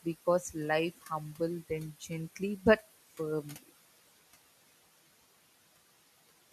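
Throughout, noise suppressor artifacts: room noise drops about 17 dB between words and rises again under speech, leaving dark spectrogram gaps between phrases.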